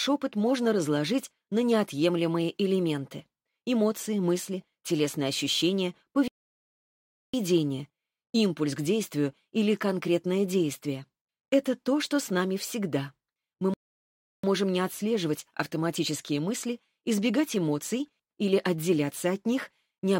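Sample clock jitter is present across the whole clip. The converter's timing wanders by a few microseconds, so each sample is taken slightly off its proper instant. Where the waveform changes fastest, that small timing error becomes a real amplitude error, roughly 35 dB below the signal. It is heard as a fine hiss or grain that rides on loud and bright passages and drops away when the sound goes quiet.

At 6.28 s the output cuts out abruptly and stays silent until 7.34 s, a gap of about 1.06 s. A second, shorter dropout runs from 13.74 s to 14.44 s, about 0.70 s. Both are playback stalls. The sound halts mid-flow and then resumes, which points to the player likely running short of data or having its audio thread blocked until it could refill the output.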